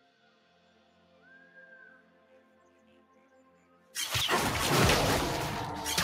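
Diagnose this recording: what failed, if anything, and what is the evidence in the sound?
Across the whole recording the sound pumps and thins: attacks come through, but sustained tones and decaying tails sink by around 10 dB. This is a speech noise suppressor applied to music or sounds in the call-processing stage, treating steady content as noise and pulling it down.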